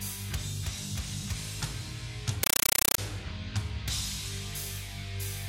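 From 2.43 to 2.98 s, a compressed stream is played as audio: undecoded AC-3 data, 8 ms bursts at 31 Hz, becomes loud chattering static.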